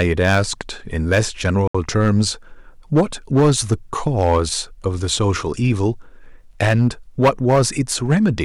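Hard clipping runs through the whole speech clip. The signal was driven about 10 dB past what one stage could pass, so roughly 2 percent of samples hit the ceiling and were cut flat, adding high harmonics heard as a harsh fuzz on every loud syllable.

From 1.68 to 1.75 s the sound drops to silence for 70 ms, then resumes. This is likely a Bluetooth stall, where interference delayed packets, the headphone buffer emptied, and playback waited for retransmitted data to arrive.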